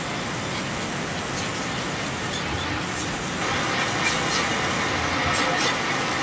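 Throughout the speech, a second copy trails about 0.25 s behind, about 5 dB louder than the original. This echo leak likely comes from a loudspeaker whose echo canceller missed it. Both copies stop near 8 kHz.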